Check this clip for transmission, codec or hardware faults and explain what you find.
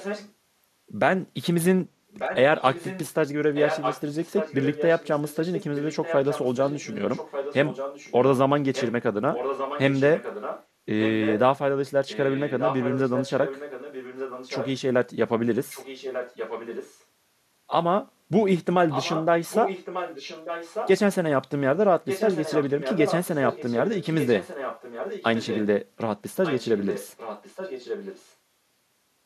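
There's an echo leak throughout: 0.0–0.33, 2.11–11.39, 12.07–14.8, 15.69–17.04, 18.89–20.9, 22.06–25.66 and 26.43–28.35 s. A copy of the speech returns about 1.19 s late, roughly 10 dB down, likely from a far-end loudspeaker whose echo canceller let it through.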